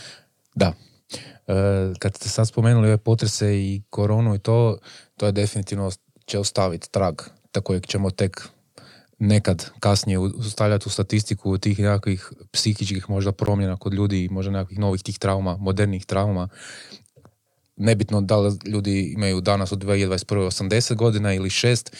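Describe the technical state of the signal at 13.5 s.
At 13.46 s the speech drops to silence for about 15 ms, between "tih nekakvih psihičkih možda" and "kod ljudi možda nekakvih", then resumes. This is likely a Bluetooth stall: interference delayed packets, the headphones' buffer emptied, and playback paused until retransmitted audio arrived.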